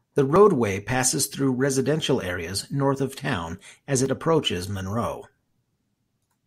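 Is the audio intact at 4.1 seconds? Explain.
No. Just after "of town as", at 4.06 s, there is a small jump forward in the speech. The likely cause is a dropped buffer (overrun), with roughly 10 ms lost and the two sides spliced directly. Unlike an underrun dropout, no silent gap is heard.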